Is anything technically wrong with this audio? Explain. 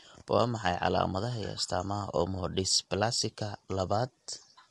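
Yes. Throughout the speech, the sound is rough and grainy, with noise filling the gaps between harmonics and nothing above 11.6 kHz. This is likely low-delay AAC compression: very short frames resolve pitch harmonics poorly, and the strain fits a bitrate around 32 kbps.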